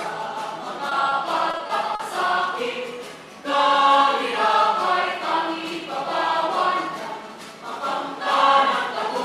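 The audio carries two forms of network damage, both from packets that failed to arrive in time. Short concealed packet loss occurs twice, at about 0.89 to 0.93 s and 1.09 to 1.13 s. Each time, about 20 ms of audio is missing and the decoder patches it by extending the preceding sound before blending back in, leaving a quick smear or wobble rather than silence. The two events are isolated, which distinguishes them from the second fault. Repeated packet loss, with its robotic sound, runs from 1.51 to 2.01 s. Four separate holes fall within that half second, totalling about 100 ms, or roughly a fifth of the stretch, with the longest at 40 ms. Because each patch barely finishes before the next hole arrives, the concealed pieces string together into a choppy texture with fragments lost, instead of a single brief blur.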